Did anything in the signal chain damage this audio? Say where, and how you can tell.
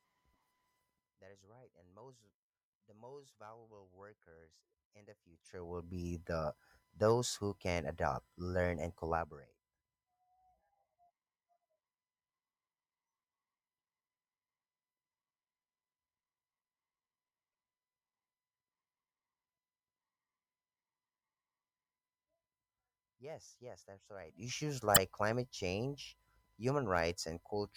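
Yes. At the codec stage there is damaged data in the compressed stream, from 24.94 to 24.98 s. A brief glitch breaks the speech there. Corrupt bytes made the decoder misread those frames, lose sync and hunt for the next valid frame header.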